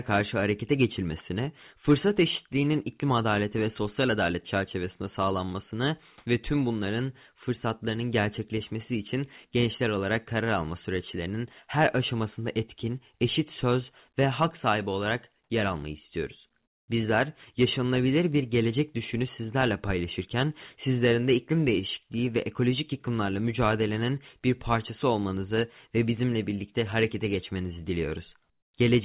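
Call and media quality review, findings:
Comfort noise in place of the background, 6.18–6.26 s (80 ms, after "sosyal adalet çerçevesinde sağlanmasını") and 16.66–16.88 s (220 ms, after "olarak yer almayı istiyoruz"). Flat, featureless hiss replaces the room tone, about 18 dB louder in the first gap and about 19 dB quieter in the second. Likely discontinuous transmission, with RFC 3389 comfort noise synthesized at the receiver. Nothing above 4 kHz, consistent with the G.711 call path.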